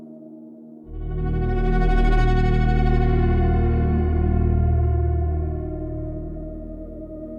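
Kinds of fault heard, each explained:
No technical faults can be heard in this audio: the signal stays continuous and steady, with nothing audibly wrong in its level, timing or frequency content.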